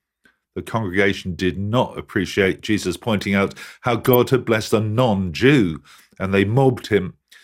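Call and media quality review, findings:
DAB burbling, 2.32–2.52 s: short noise blips in single sub-bands over speech. Probable component: DAB receiver/MP2 decoder under weak reception. Residual bit errors, a few tenths of a percent, pass error correction and corrupt scale factors and samples, so individual sub-bands jump in level for up to a frame.

DAB burbling, 3.92–4.15 s: same sub-band blips, about 0.23 s. Same mechanism. Roughly a dozen damaged audio frames per burst.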